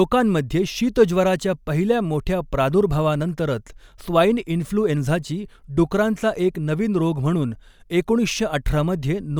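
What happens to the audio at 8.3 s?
Nothing goes wrong at 8.3 s; the speech carries on intact through that moment.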